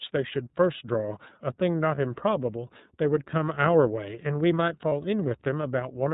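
The speech passes through the iLBC codec end to end. Its narrowband coding cuts off everything above 4 kHz, and its frame-by-frame excitation coding leaves the speech plainly rough and synthetic, which fits the 13.33 kbps mode with 30 ms frames. Lost iLBC frames then break the signal twice, at 1.95 to 1.99 s and at 4.89 to 4.92 s. Each gap sounds like a single 30 ms frame that the decoder filled by repeating the last pitch cycle with noise, so each is heard as a brief held, buzzy vowel. Because each iLBC frame is decoded without the one before it, the speech sounds normal again immediately after each gap.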